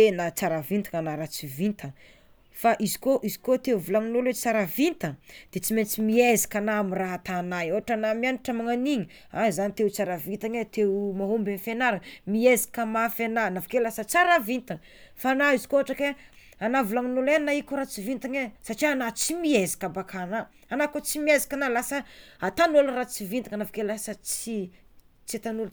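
No technical faults can be heard in this speech recording; the signal stays continuous throughout, with no disturbances at any point.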